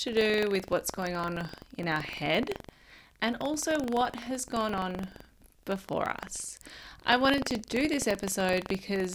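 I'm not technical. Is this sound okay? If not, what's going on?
No. All the way through, the speech has a steady robotic buzz, a fast rattle of about 23 times a second that sits on the voice and goes quiet in the pauses. This is buffer tearing. The program feeding sound to the playback hardware has fallen out of step with it, so in every chunk a small slice is replaced by audio from a fraction of a second earlier. The buzz rate fits a 2048-sample buffer.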